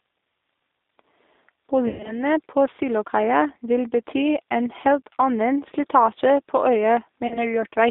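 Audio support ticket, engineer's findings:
G.729 codec, whole clip. Speech band-limited to about 250 Hz to 3.7 kHz, nothing above 4 kHz. Roughness and a synthetic edge are plainly audible. Consistent with G.729A at 8 kbit/s: each 10 ms frame is rebuilt from a vocal tract filter, a pitch predictor and a few pulses, so fine detail is lost.

VoIP packet loss concealed by the speech codec, 1.88 to 2.23 s. About 140 ms missing within 160 ms, with the longest gap 120 ms. The decoder stretches the last frame into a fading buzzy tone or coloured noise, and speech stays weak afterwards. Second event at 7.27 to 7.44 s: about 40 ms lost, a shorter decaying fill with a similar recovery lag.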